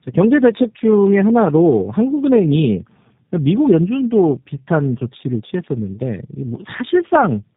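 From start to finish the speech carries tandem speech coding: it has been squeezed by a low-rate speech coder, expanded for a plain telephone link, then squeezed again by a second coder working on the first one's errors. The result is a rough, muffled, warbling sound with nothing above 3.8 kHz. The doubled artefacts fit two passes through an 8 kbit/s coder such as G.729A with a G.711 A-law link between them.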